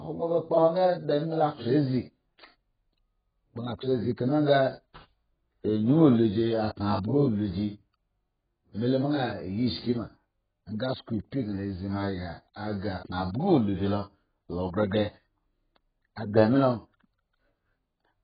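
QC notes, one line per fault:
throughout, AAC compression: the speech sounds dull and smeared, with a warbling, fizzy texture on sibilants. The likely cause is heavy AAC-LC coding at a very low bitrate, around 11 kbps. A spectrogram shows a flat ceiling at 4.9 kHz with smeared, blurry energy below it.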